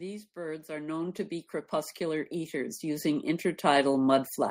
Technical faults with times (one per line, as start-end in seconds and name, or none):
0.33-1.27 automatic gain rising
1.98-3.93 automatic gain rising